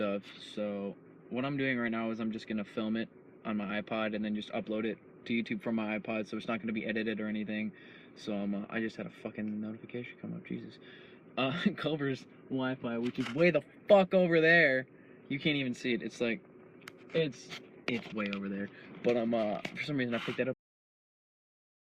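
Right at 20.53 s the sound just stops dead mid-event, and that's a cut-off end. The final stretch of audio never made it out: those last buffers weren't written or played, so instead of letting the sound finish and decay naturally, the signal falls straight to digital silence. There's no tail at all, and the remaining 1.3 seconds or so to the end of the file are flat nothing.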